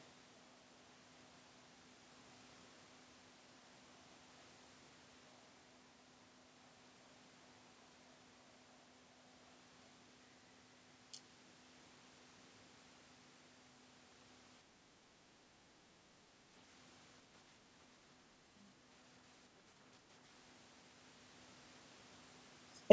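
From 14.64 to 16.54 s the speech dips by a few decibels in patches, likely speech suppressed in double talk while the other side spoke.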